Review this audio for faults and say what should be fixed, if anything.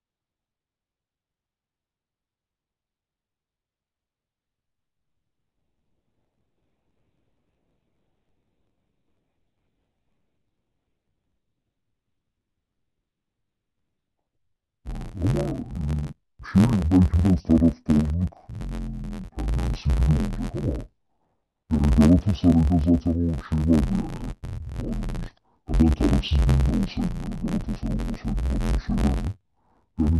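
Interleaved audio read as planar runs throughout the speech. Each block of about 11.6 ms, which fits a 512-sample buffer, is split into halves and treated as separate channels. That makes the voice dull and robotic, with an 86.1 Hz buzz. Prevention: declare the sample layout explicitly at every hand-off.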